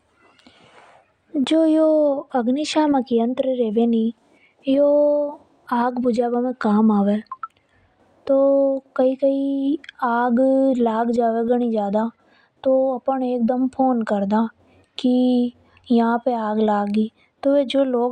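A speech recording, and nothing is technically wrong with it.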